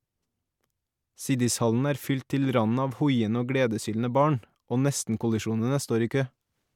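Nothing in the recording stood out as a technical fault on listening.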